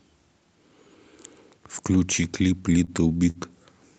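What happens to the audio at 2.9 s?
A sound is briefly held and stretched, with a faint buzz, from 2.84 to 2.91 s: a short stall from a late packet. The jitter buffer ran dry, so about 35 ms was filled in before playback resumed without losing anything.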